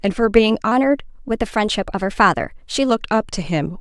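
Speech samples here are played at the wrong sample rate, with no conversion, from 0.72 s to 2.9 s. The playback clock runs about 1.09 times too fast, which fits audio recorded at 22 kHz being played out at 24 kHz. Speed and pitch rise together by that ratio, so the speech in this stretch sounds hurried and raised by roughly 1.5 semitones, then drops back to its normal pace and pitch.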